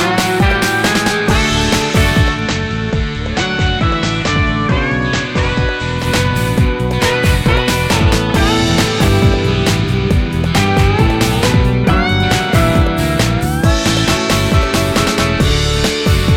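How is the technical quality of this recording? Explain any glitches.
The recording has one fault, from 2.32 to 6.08 s: digital radio blending to analogue. The receiver lost the digital stream and cross-faded, over about 100 ms, to the station's FM broadcast, then back. During that stretch the level drops by about 3 dB, and a steady hiss sits roughly 30 dB below the programme. Unlike a dropout or muting, the sound never stops. It becomes noisier, then returns intact.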